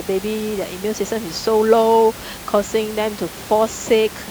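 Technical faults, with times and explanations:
No technical faults can be heard in the signal; the only sound besides the speech is the room's own background noise, sitting about 16 dB below it.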